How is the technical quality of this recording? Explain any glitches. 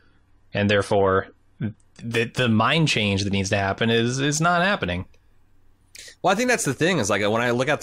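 The speech has one quality fault, at the very start. From 0.0 to 2.0 s, the adaptive stream starts at a low bitrate. The player began on a cheap version to start fast. Nothing sounds above 12 kHz, and codec artefacts are stronger. That points to roughly 32 kbit/s AAC. At 2.0 s it steps up, likely to about 96 kbit/s. The treble returns suddenly, with no gap.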